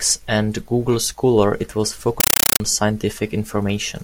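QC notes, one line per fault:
2.20–2.60 s, compressed stream played as audio. The speech gives way to very loud, harsh chattering static. Encoded data was sent as plain samples and never decoded. Each 8 ms noise burst is followed by silence, 31.25 times a second, which fits a 384 kbps AC-3 stream.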